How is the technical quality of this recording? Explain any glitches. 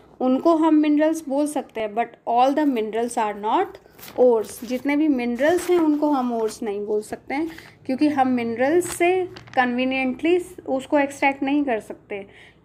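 The main problem is periodic USB or driver dropouts. From about 1.8 s to 7.8 s there's a tick every 2.0 s, around four in total. Something keeps stalling the bus or driver, so under a millisecond of sound gets skipped each time, leaving a click in the signal.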